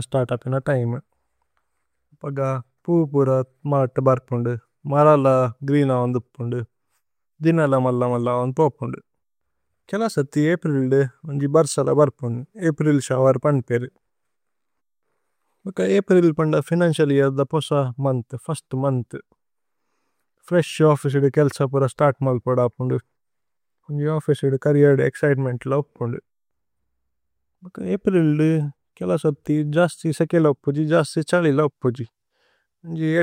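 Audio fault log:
Nothing stood out on listening to this speech recording.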